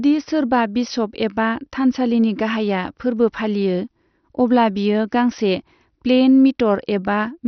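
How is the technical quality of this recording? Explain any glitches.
The speech is heavily degraded throughout by one fault. For the whole clip it sounds dull and muffled, with nothing above 6.2 kHz, and carries a gurgling, granular roughness. This is likely MP2 compression at a low bitrate, perhaps around 48 kbps. With too few bits to share among its 32 sub-bands, the codec switches off the upper bands and quantises the remaining ones coarsely, so they flicker and grind.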